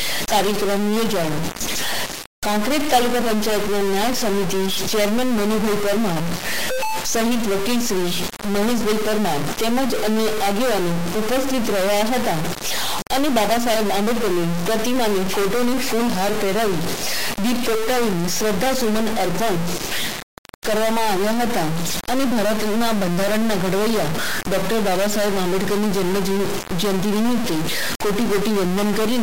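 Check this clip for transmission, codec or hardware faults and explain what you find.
There is one fault, and it runs the whole length of the clip. A stuck bit is present from start to finish. One sample bit is most likely jammed at a fixed value, so about half the samples jump by a step of about -20 dBFS. This gives a harsh, buzzy distortion on the sound, and the quiet gaps fill with a loud, gritty noise floor.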